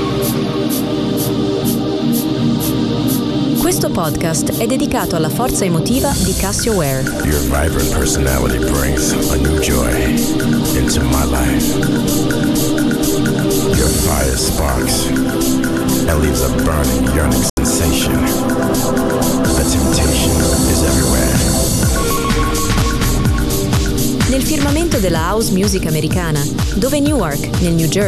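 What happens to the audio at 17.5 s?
A digital broadcast dropout hits at 17.50 to 17.58 s. The receiver stopped getting usable frames, likely three failing their checksum, and muted until clean data resumed. The sound fades out in about 3 ms, leaving a roughly 72 ms silent hole before returning.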